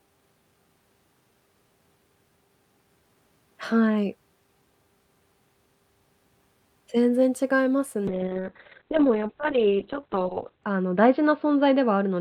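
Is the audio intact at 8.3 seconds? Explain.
No. From 8.09 s to the end at 12.21 s the speech turns rough and muffled, losing everything above 4 kHz. This is a call bitrate drop: the encoder fell from 64 to 6 kbps, coding coarsely and narrowing bandwidth from 20 kHz.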